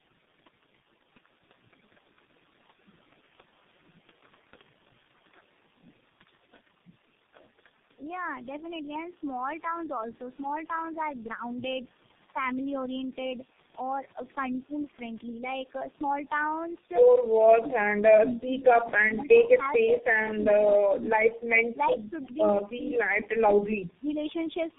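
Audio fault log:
throughout: Tandem speech coding. The call appears to have passed through three low-rate speech codecs in a row, likely on separately coded network links, each re-coding the previous one's damaged output. The speech is rough, muffled and warbly, with nothing above 3.8 kHz.
19.08–20.47 s: Speech suppressed in double talk. An echo canceller likely could not separate its own talker from the overlapping loudspeaker echo and attenuated both. About 700 ms of speech in this span sinks, by roughly 15 dB at worst, dipping and dulling in patches.
22.23–22.27 s: Echo leak. A loudspeaker-side echo canceller likely let part of its microphone pickup through. A brief, faint copy of earlier speech, delayed by 345 ms and about 35 dB below the main speech, comes back as a scrap.
22.77–24.16 s: Speech suppressed in double talk. Both ends talking at once likely led the echo canceller to turn the near talker down with the echo. 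About 700 ms in this span is attenuated, roughly 10 dB at deepest, so the speech thins and fades intermittently.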